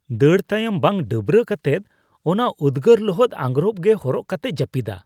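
No technical faults are audible anywhere in this speech.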